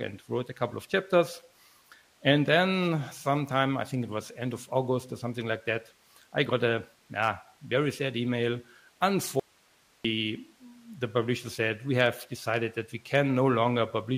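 At 9.40 s the audio drops out abruptly and stays out until 10.05 s, a gap of about 0.65 s. This is an audio dropout to a faint residue: the wanted signal vanishes mid-flow, but a low hiss remains in the gap, roughly 35 dB below the normal level. The likely cause is a brief loss of the source while the path after the break stayed live. The hard cut and return set it apart from a natural pause or fade.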